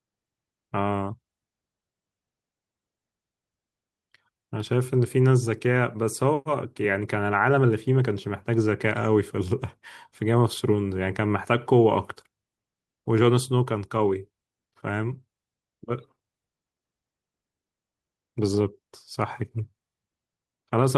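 Speech recording with no audible technical faults: no dropouts, clipping, glitches or other defects to report at any point.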